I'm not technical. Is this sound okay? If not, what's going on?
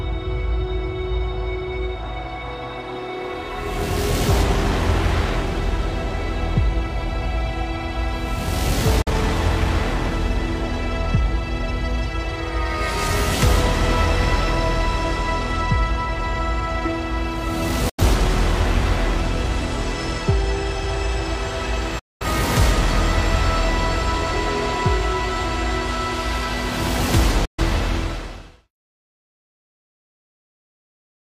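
No, there's a digital broadcast dropout: the receiver briefly lost clean data and muted until good data returned. You'll hear short quick-fading gaps at 9.02, 17.89, 21.99 and 27.45 seconds, from about 40 to 210 milliseconds. Whatever played there is gone. The fade-out at the end is intentional.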